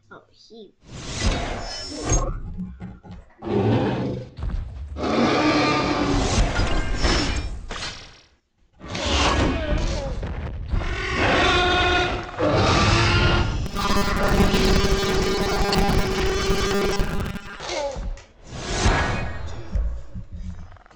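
From 13.66 to 17.60 s the audio turns into a rigid, metallic 200 Hz buzz: robotic sound from repeated short buffers, likely from audio arriving too seldom, so 5 ms stretches replay and about half is repeats. A spectrogram shows evenly spaced 200 Hz comb lines; the waveform, identical recurring cycles.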